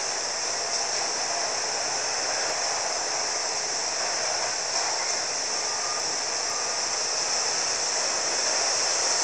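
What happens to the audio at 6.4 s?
At 6.4 s you're inside a chunks-out-of-order fault running from 5.5 to 6.5 s. A 500 ms chunk arrived one chunk late, so the two half-second pieces play swapped. Nothing's missing, but that second sounds jumbled, with three hard joins.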